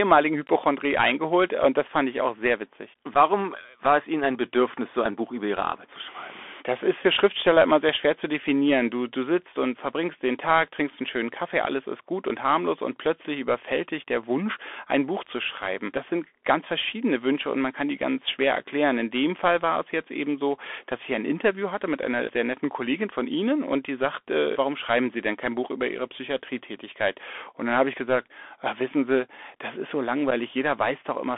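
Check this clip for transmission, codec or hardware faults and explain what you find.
Two faults are audible: narrowband Bluetooth headset coding throughout, and two brief dropouts.

Bluetooth CVSD headset codec, throughout: the speech sits in a band from about 250 Hz to 3.5 kHz, with no air above. A one-bit delta coder (the sound fits a 64 kbps CVSD link) has an adapting step size that can't keep up with loud, fast-changing sounds. That makes the s sounds scratchy and leaves a granular hiss under the speech. This grainy slope-overload roughness sets it apart from plain band-limiting.

Unconcealed Bluetooth headset packet loss, at 3.14 s after "ich auch sehr witzig" and at 30.31 s after "das ist so": each is a 7.5 ms hole, which points to a single lost packet. The gap is not concealed, so it has hard edges, and the speech returns briefly quieter. That short level dip on recovery separates it from an ordinary digital click.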